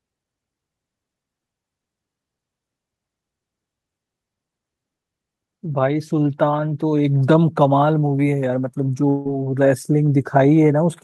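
From 9.09 to 9.27 s the sound decays into a fading buzz, then returns with content skipped rather than delayed, likely a long network dropout, not a brief packet loss.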